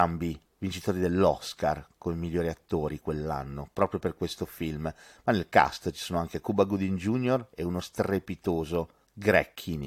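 No technical faults turn up anywhere in the speech. There is no moment in it that calls for a timestamp or an explanation.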